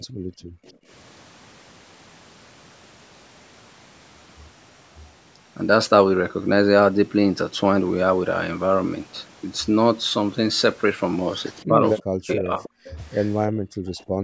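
A speech recording from a call, band-limited to nothing above 8 kHz by the call's microphone processing. Background gated by the echo canceller: the canceller clamped the microphone while the loudspeaker played, so room sound drops by about 31 dB from 0.0 to 0.89 s and about 27 dB from 13.5 to 14.24 s. A faint copy of the speech trails it by 316 ms at 0.66 to 0.72 s and 13.98 to 14.04 s, and a clearer, louder copy at 12.31 to 13.52 s. This is likely echo leak, loudspeaker sound the canceller failed to remove and sent back. Between 11.68 and 12.97 s the talker's voice dips sharply, roughly 40 dB at its deepest. This is speech suppressed in double talk, the likely result of both sides speaking at once and the canceller turning everything down.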